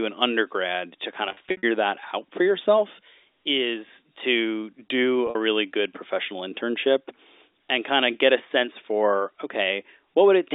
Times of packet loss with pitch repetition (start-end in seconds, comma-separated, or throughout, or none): 1.29-1.63, 5.27-5.35